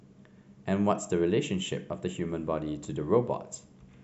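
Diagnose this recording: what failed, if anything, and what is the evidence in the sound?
Nothing failed in this recording, and the sound offers no evidence of a fault at any stage.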